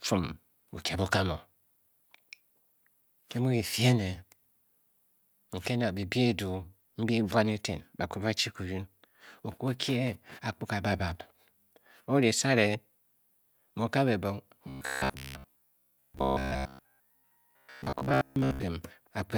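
From 14.69 to 18.63 s, robotic sound from repeated short buffers turns the speech into a rigid metallic 66.8 Hz buzz. The likely cause is a chunk of about 15 ms being replayed while most of the real audio is skipped. A spectrogram shows evenly spaced, perfectly flat harmonic stripes, and the waveform shows an identical short cycle repeating.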